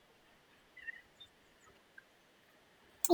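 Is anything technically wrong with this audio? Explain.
Yes. A wrong sample rate affects the whole clip. The samples are played back at roughly twice the rate they were captured at, with no conversion, which fits audio recorded at 22 kHz being played at 44.1 kHz. Every sample passes in half the time, so the speech runs at double speed and its pitch rises by 12 semitones, a full octave. The voice sounds hurried and chipmunk-like, with speed and pitch shifted together.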